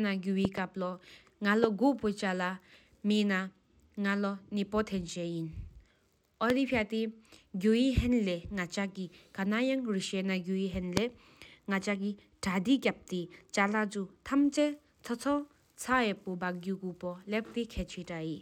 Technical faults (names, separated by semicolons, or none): loud pop